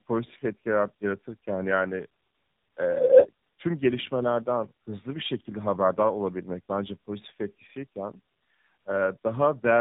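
Tandem speech coding runs through the whole clip: the speech has passed through two low-rate speech codecs in a row, with a plain telephone-grade stage between them. The sound points to something like G.729A feeding AMR-NB. The second coder had to model audio the first had already smeared, so the errors stack. The speech comes out rough, muffled and warbly, and nothing remains above 3.8 kHz.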